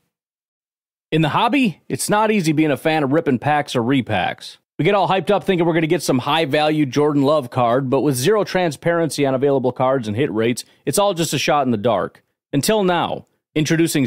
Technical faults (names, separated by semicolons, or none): dropped samples